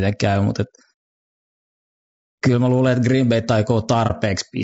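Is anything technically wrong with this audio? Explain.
Yes, two things. All the way through, the speech sounds rough and grainy, with noise between harmonics, likely low-delay AAC compression whose short frames starve pitch detail at what sounds like about 32 kbps. Then at 4.07 to 4.12 s there's AAC frame loss with muting: a lost frame got zeroed, so the sound fades out and back in, leaving a brief dip.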